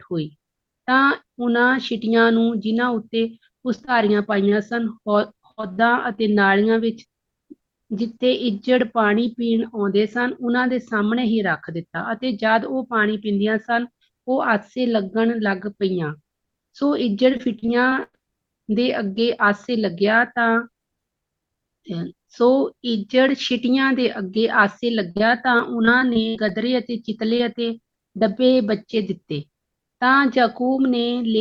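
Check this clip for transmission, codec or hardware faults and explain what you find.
The clip has two kinds of network damage, both from lost packets that the receiver had to paper over.

Short concealed packet loss hits at 3.75–3.79, 3.85–3.89, 4.49–4.53 and 27.37–27.41 s. About 20 ms goes missing each time, and the decoder extends the last bit of sound to fill it, so you get a quick smear or wobble.

Repeated packet loss (robotic sound) covers 5.51–6.19 s (four gaps), 17.37–18.15 s (six gaps, the longest about 0.1 s) and 25.11–26.51 s (nine gaps). The holes come so close together that the patching never settles, and those stretches turn choppy, with pieces missing.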